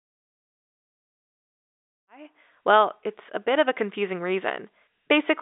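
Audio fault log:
No faults heard in this speech recording.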